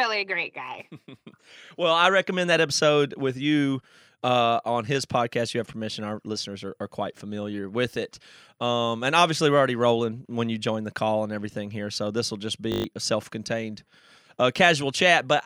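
Speech, with a system hang loop from 12.72 to 12.84 s: a 20 ms buffer cycles six times while the driver stalls, producing a 50 Hz buzz and dropping about a tenth of a second. The waveform shows identical repeating segments, and the spectrogram shows evenly spaced harmonic lines at multiples of 50 Hz.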